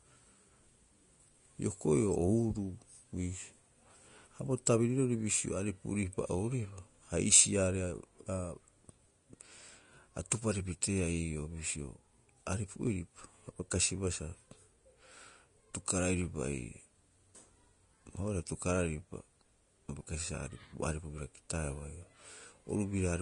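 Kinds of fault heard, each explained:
Vorbis compression: The speech sounds hissy and grainy throughout, with roughened tones and softened consonant onsets. This is likely low-rate Vorbis coding, consistent with roughly 33 kbps. The encoder models a smooth spectral floor, then quantises the residue so coarsely that high-frequency detail turns into noise of similar energy. On a spectrogram, the energy stops at a hard shelf near 10.5 kHz, and the band below it looks blotchy and speckled rather than finely striated.
pre-echo: At 4.66 s a hiss arrives about 10 ms before a sharp attack, which makes the attack sound smeared. A transform codec spreads quantisation noise across its whole block. When a loud transient lands late in the block, noise scaled for that loud part also fills the quiet stretch before it. On a waveform, low-level fuzz leads the transient. On a spectrogram, a thin broadband smear sits just ahead of it.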